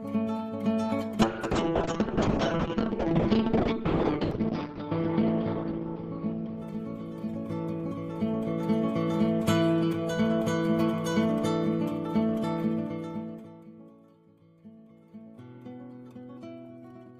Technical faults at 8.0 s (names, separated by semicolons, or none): call bitrate drop